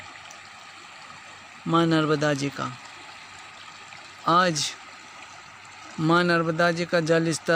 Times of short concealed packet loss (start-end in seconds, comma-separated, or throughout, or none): none